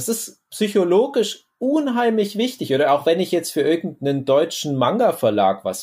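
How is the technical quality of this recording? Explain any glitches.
No glitches can be heard anywhere in this speech recording. There is nothing here that calls for an explanation.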